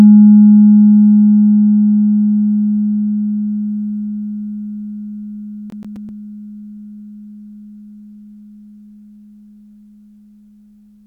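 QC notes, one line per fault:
5.70–6.09 s, CD stuck on one turn: a 130 ms slice replays three times with brief mutes, so the waveform shows identical repeated blocks separated by thin silent gaps.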